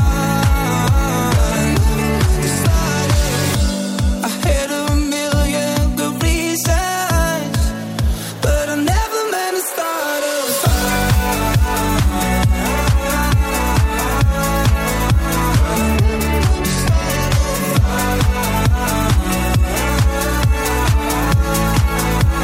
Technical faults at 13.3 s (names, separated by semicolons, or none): none